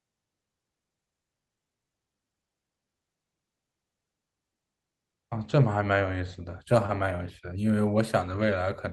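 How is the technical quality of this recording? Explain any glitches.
No glitches are audible in this speech recording.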